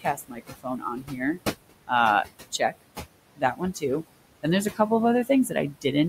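A short speech recording in which room noise sits about 11 dB below the talker and is handled by a noise suppressor throughout. The suppressor pulls the noise down by about 21 dB in every band it judges to be steady noise, working frame by frame, so the background drops away in the gaps and returns underneath the voice. The same processing also causes speech cut by the noise suppressor, where parts of the voice are misread as noise and attenuated with it. This happens from 0.0 to 1.39 s, where close to a second of material is pulled down by up to about 19 dB, and again from 2.52 to 2.83 s, with a brief stretch dropping by up to about 21 dB. It recurs from 3.36 to 3.83 s, with roughly a fifth of a second down by up to about 19 dB, and from 5.49 to 5.85 s, with a short stretch down by up to about 13 dB. In each span, the affected speech sounds swallowed or faint.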